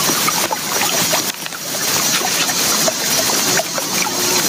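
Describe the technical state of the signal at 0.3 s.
At 0.3 s you're hearing gain pumping, and it isn't local to that moment; it runs through the whole clip. The level keeps lurching, with the gain swinging by something like 15 dB, so loud and quiet parts end up squeezed together and the sound comes across squashed. The likely cause is input gain set far too high for the microphone, with a fast limiter or compressor clamping down on every loud sound and then letting go.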